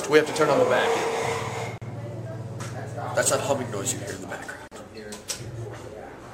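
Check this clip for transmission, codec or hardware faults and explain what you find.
Two gaps at joins of encoded pieces, at 1.78 to 1.82 s (about 37 ms) and 4.68 to 4.72 s (about 39 ms). Separately encoded segments were spliced untrimmed, leaving encoder delay and last-frame padding as silence. Continuous sound briefly drops out with smeared edges, then resumes where it stopped.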